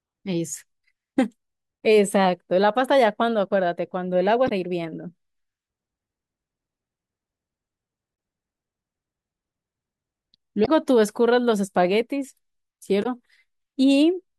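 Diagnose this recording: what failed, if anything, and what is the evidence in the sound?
Damaged data in a compressed stream, at the codec or storage stage: short glitches at 4.45–4.52, 8.13–8.15, 10.62–10.69 and 13.00–13.06 s, where corrupt frames are misdecoded before resync, unlike muted network dropouts.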